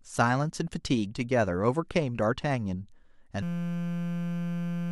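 From 3.43 s to the end, a system hang loop cycles a 5.8 ms piece, fitting a 256-sample buffer, into a steady 172 Hz buzz, not stutter.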